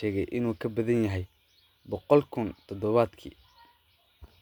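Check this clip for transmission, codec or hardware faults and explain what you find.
Nothing here points to a transmission, codec or hardware problem; the speech comes through without any audible fault.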